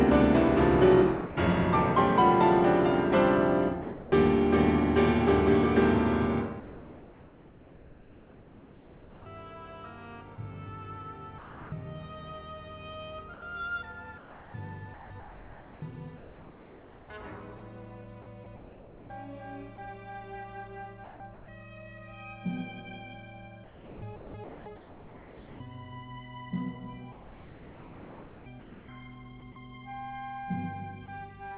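At 1.26 s the sound cuts out for 100 ms and steady hiss fills the gap; at 3.82 s a 300 ms stretch does the same, costing about 170 ms of real sound. This is sound dropped by the voice detector, likely because the sender judged quiet sound to be background and stopped transmitting.

From 6.6 to 9.26 s the background turns into a smooth, featureless hiss, about 2 dB quieter and sitting about 27 dB below the loudest passages. The same thing returns in pauses totalling about 3.3 s between 11.38 and 21.48 s, and about 3.2 s between 23.64 and 28.88 s. This is comfort noise in place of the background, likely synthetic noise generated by the receiver while the sender paused transmission. Throughout the clip nothing is heard above 4 kHz, consistent with a G.711 mu-law call codec at 64 kbps.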